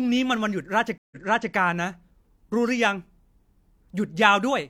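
Speech with a stream reconnect between 0.98 and 1.53 s: the sound drops out for about 133 ms, then resumes roughly 0.42 s earlier than where it stopped, so a short stretch repeats, because the player restarted its decoder mid-stream after the server resent buffered audio.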